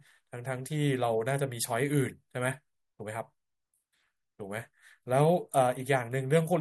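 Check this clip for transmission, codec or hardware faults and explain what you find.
The speech signal arrives intact and continuous, with nothing in the transmission, encoding or playback chain audibly interfering with it.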